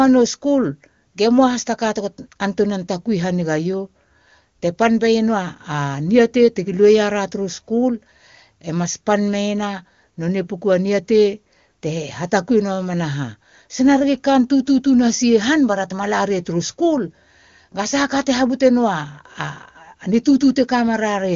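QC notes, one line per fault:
No faults to note: the speech carries the band limit of AMR wideband (HD Voice) coding, with nothing above 7 kHz.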